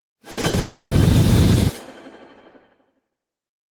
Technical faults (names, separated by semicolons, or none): burst of packet loss; short concealed packet loss; long network dropout